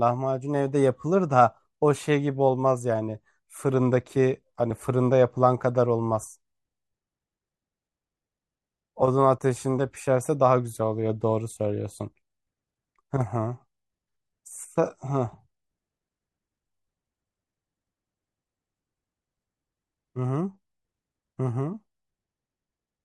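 Compressed frames skipped at 4.69 s and 9.01 s: each time the speech jumps ahead by about a single 24 ms frame, around 20 ms of audio, because that frame was missing or rejected by the decoder.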